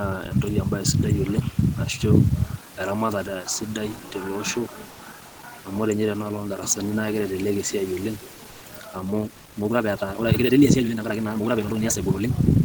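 Speech with room noise about 26 dB below the voice, and two kinds of fault. In two short pauses, from 4.90 to 4.99 s and from 8.50 to 8.61 s, the real background is replaced by comfort noise. For 90 ms and then 110 ms, the room's background turns into a steady, featureless wash. That is likely the receiver filling the gaps left by Opus discontinuous transmission while no speech was detected. It is not a dropout, because sound never falls to silence and the level barely moves, at most about 1 dB quieter. Only the character of the background changes. From 8.85 s to the end, the audio is a time-stretched section. It plays about 1.71 times faster, with the pace jumping abruptly and the delivery turning rushed. The likely cause is software squeezing the passage by dropping short pieces. Unlike a simple sped-up playback, the pitch does not rise, so the voice keeps its normal register while the timing is compressed.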